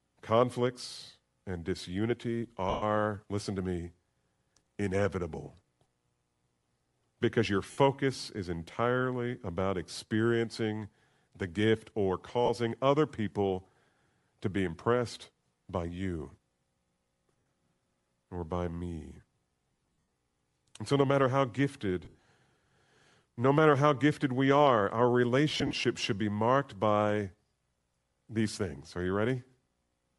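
Right from the start the speech has a breathy, grainy top end, with the upper band thinned out and filled in with hiss. That's plainly Bluetooth LC3 compression, likely at a modest rate that fits around 48 kbps with 10 ms frames.

On top of that there are lost LE Audio frames. When a frame goes missing, the decoder keeps replaying the last spectrum with scrambled signs, so the sound briefly smears into noise. You hear this at 2.70 s (120 ms), 7.71 s (70 ms), 12.46 s between "experiencing the gift or" and "other people" (30 ms), and 17.39 s (70 ms). Scattered bursts follow at 19.69 to 20.06 s, at 22.05 s after "so no matter how", and at 25.50 s between "gifted we are our" and "should be marked by".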